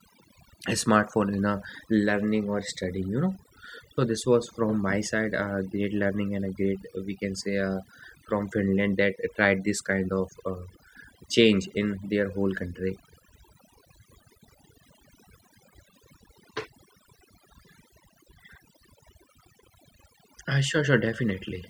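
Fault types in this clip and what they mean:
Overdone noise removal: a noise reduction stage was driven far too hard on a noisy recording, so any frequency band sitting close to its noise estimate gets pulled right down or switched off, and quieter parts of the speech are cut away along with the noise. Throughout this speech clip the background drops and breaks up into twinkling, chirpy specks.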